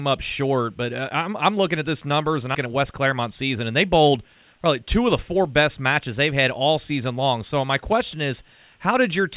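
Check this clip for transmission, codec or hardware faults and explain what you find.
Two transmission faults are audible, both in the first half of the speech.

Skip ahead at 2.55 s. About a fifth of a second of audio is simply gone. Later audio was already waiting, so the missing stretch was dropped and playback jumped forward. There is no gap. The two sides butt together almost directly, so the speech lurches.

Jitter buffer speed-up from 2.66 to 3.90 s. Right after the skip, the receiver was still holding more audio than it wanted. It trimmed many short pitch-period pieces, roughly a tenth of a second in total. The speech runs at 108% speed with unchanged pitch and sounds slightly rushed.

The narrow band, with nothing above 4 kHz, fits a G.711 A-law call path at 64 kbps.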